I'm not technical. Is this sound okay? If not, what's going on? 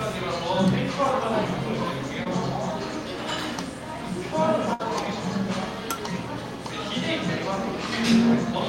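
No. At about 2.23 to 2.27 s there's a tiny smear or wobble, a short concealed packet loss. Roughly 20 ms of audio never arrived in time, so the receiver guessed, stretching the last bit of sound to cover the hole before blending back in.

At about 4.73 to 4.81 s the sound briefly turns into a held buzz or fading hiss, then jumps ahead. That's a burst of packet loss: about 60 ms went missing, and the receiver padded it out by repeating and fading the last sound.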